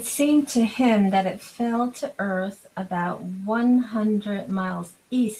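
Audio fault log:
4.49–4.75 s, lost packets rebuilt from error correction: no gap, just a rougher, noisier 140 ms where low-bitrate backup copies stood in, unlike a silent dropout.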